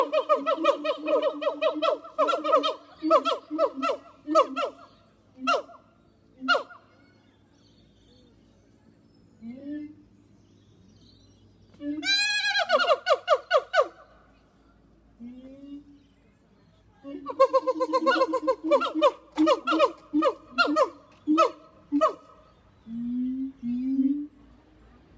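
Nothing here sounds like a technical fault at all; the audio just runs along without a single glitch worth pointing out.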